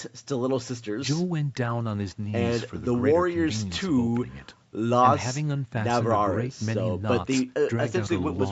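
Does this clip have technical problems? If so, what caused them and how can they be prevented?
No, nothing in this speech clip stood out as a problem on listening.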